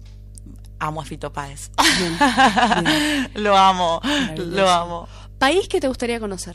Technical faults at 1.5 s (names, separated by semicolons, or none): mains hum